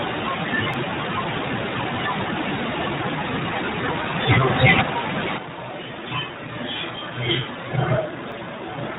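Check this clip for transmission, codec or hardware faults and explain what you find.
Two kinds of fault are present: brief skips from dropped buffers, and a sudden change to a distant microphone for the final stretch.

Dropped buffer (overrun) at 0.74 s and 8.32 s: each is a skip where the speech jumps ahead by a few milliseconds. The likely cause is the software not collecting samples before the hardware overwrote them. No silent gap separates the two sides, which sets it apart from a dropout.

Switch to a distant microphone from 5.40 s to the end: the voice abruptly turns hollow and roomy, thinner in the bass and about 10 dB quieter, with room noise only around 35 dB below the speech. The likely cause is the close microphone's signal being lost, leaving a farther pickup. Unlike a simple gain drop, the tone and ambience change too.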